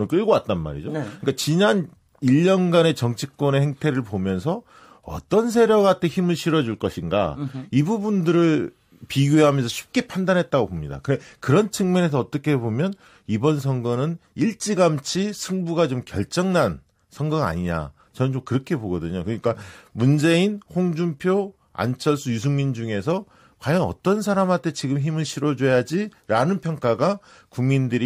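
Nothing in the speech here points to a technical fault, so there's nothing to flag at any point in the recording.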